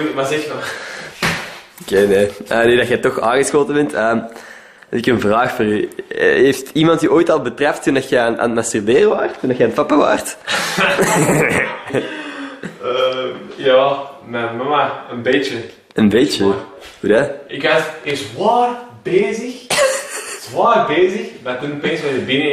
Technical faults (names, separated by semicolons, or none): none